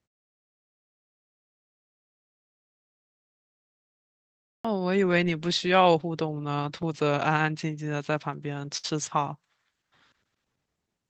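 This speech clip has three faults. The sender's audio clock runs roughly 5 percent slower than the receiver's, which is clock drift between sender and receiver. The jitter buffer keeps draining, so the receiver has to fill the shortfall by repeating or stretching short pieces of audio. As a result, small timing hiccups recur at uneven intervals through the whole clip: brief stutters and slightly drawn-out moments rather than a steady flow. At 4.40 s, after the pause leading up to it, the output device had gone to sleep in the silence and needed time to wake and lock again. That produces a clipped start after a pause: about 0.25 s of the opening sound is swallowed, so the speech starts abruptly out of silence without its first sounds. At 8.77 to 8.86 s a packet arrived late and the jitter buffer ran empty, causing a short stall from a late packet. The receiver held the last sound for about 62 ms until the packet came in, then carried on from the same point. 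Nothing is lost, but the sound is held too long, with a faint buzz or dip. The audio also passes through a call path with Opus coding, whose top end stops at about 8 kHz.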